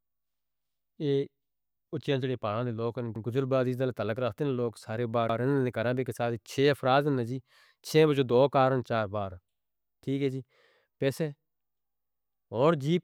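At 3.16 s, just before "گزر بازیدل تعلق", a repeated buffer kicks in. New audio didn't arrive in time, so the same chunk of speech, about 93 ms (consistent with a 4096-sample buffer), plays twice with a hard join, giving a quick stutter. It happens again at 5.29 s, right after "لوگ سارے بار". At 12.07 s the chunk plays three times, stretching the stutter to 12.26 s. No speech seems to go missing.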